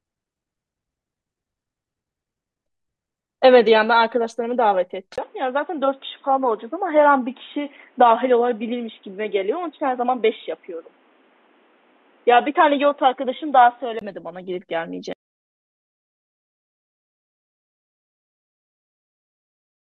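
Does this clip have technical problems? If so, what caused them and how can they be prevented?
Yes. From 5.16 s to 14.01 s the speech turns dull and boxy, with nothing above 3.8 kHz and a new noise floor about 40 dB down, after a 20 ms gap. The level stays about the same. This is likely an input switched to a poorer device with a narrower band. A spectrogram shows a hard ceiling at 3.8 kHz across that span, and the waveform shows a brief flat silence at the switch. To prevent it, lock the recording to one chosen input and turn off automatic device switching.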